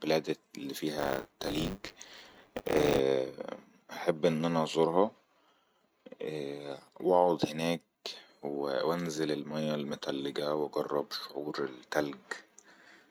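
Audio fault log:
0.98 to 2.99 s, buffer tearing: the writer and reader of the output buffer have drifted into each other, so a small slice of every period replays audio from about 20 ms earlier with hard joins, giving a 100 Hz robotic buzz that fits a 10 ms period.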